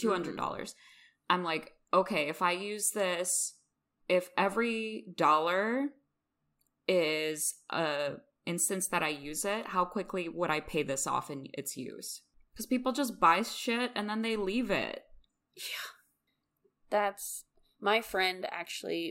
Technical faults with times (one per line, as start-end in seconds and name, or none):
none